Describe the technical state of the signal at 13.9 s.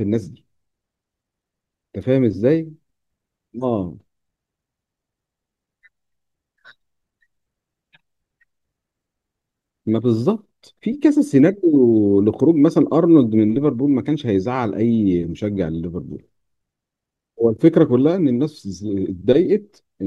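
At 13.9 s the signal is intact, with no fault audible at that moment.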